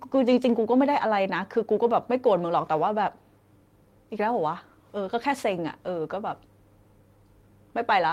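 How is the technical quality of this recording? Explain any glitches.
No glitches are audible anywhere in the recording, and the technical quality gives nothing to flag.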